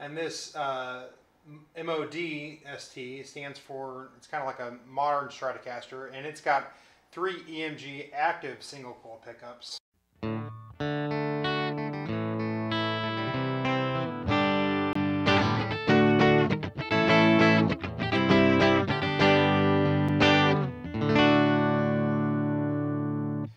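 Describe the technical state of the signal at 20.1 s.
At 20.09 s there is a block of digital silence lasting about 5.8 ms: the output buffer was likely not filled in time and a run of samples went silent, a span that fits a 256-sample buffer. The signal drops out and returns with no fade, and at this length it is heard as a tick or dip rather than as silence. Unlike a faded dropout or a single-sample glitch, it is a short, hard-edged hole of silence.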